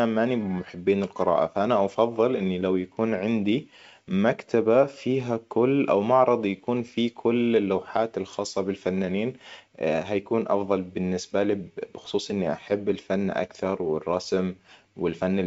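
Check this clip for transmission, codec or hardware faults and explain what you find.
No transmission, codec or hardware fault can be heard in the recording. The speech comes over G.722 wideband telephone coding at 64 kbit/s, which carries it up to about 7 kHz with at most a faint hiss in the band above 4 kHz.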